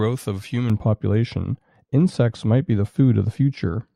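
Speech, with de-emphasis applied wrongly from 0.70 s to the end: a treble-cut filter slopes the response smoothly downward, reaching about 11 dB below the 1 kHz level at 10 kHz, so consonants lose crispness and the sound turns dull and muffled.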